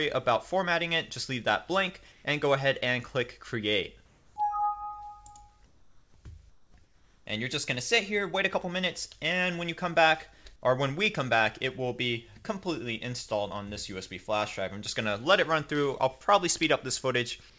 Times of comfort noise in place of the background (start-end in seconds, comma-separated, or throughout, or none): 2.12-2.24, 4.06-4.36, 5.66-6.14, 6.50-7.26, 17.50-17.58